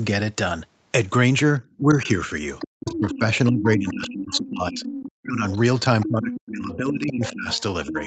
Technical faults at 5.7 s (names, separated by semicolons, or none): other side's voice leaking through